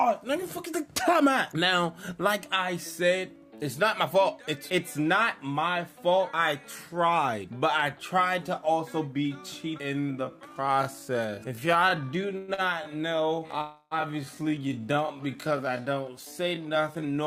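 A time-stretched section runs from 9.77 s to the end at 17.27 s. The pace abruptly drops to 0.62 times normal while the pitch holds, so the sound drags, likely from software lengthening the audio by repeating short pieces.

A call audio freeze sits at 12.37 to 12.51 s, and a second at 13.61 to 13.94 s. The last sound carries on as a fading buzz or hiss for 104 ms and then 299 ms before the audio resumes from where it stopped, with nothing lost. This is likely packets held up in transit, leaving the jitter buffer empty.

A short stall from a late packet follows at 12.54 to 12.61 s. A packet missed its slot, so the receiver held the last sound for 41 ms with a slight buzz or dip, then continued without losing anything.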